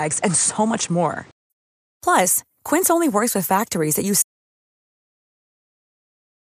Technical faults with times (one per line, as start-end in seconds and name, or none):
0.00-1.50 input switched to a poorer device
4.22-6.57 audio dropout to silence